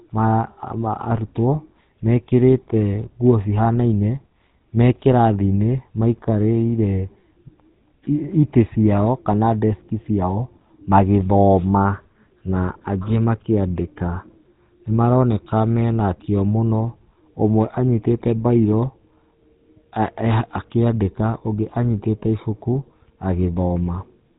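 Speech run through the GSM full-rate codec for its whole length, with a plainly audible buzzy, gravelly roughness consistent with a 13 kbps pulse-excited vocal-tract model; a spectrogram shows an empty band above a hard 3.8 kHz ceiling.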